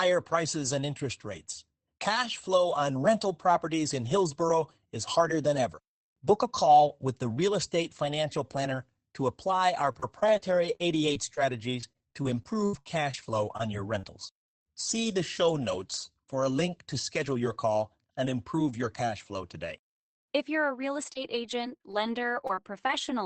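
Right after "to apply", from 9.85 to 14.74 s, there's a run of repeated packet loss that gives it that robotic sound: a couple dozen short holes, the longest 72 ms, covering about 13% of the stretch. Each hole gets patched by stretching the last bit of sound, so it goes choppy. It happens again after "you're a real", from 21.02 to 23.09 s, with shorter gaps up to 25 ms. That sits on top of a call path whose top end stops around 8 kHz, which fits Opus at a low bitrate.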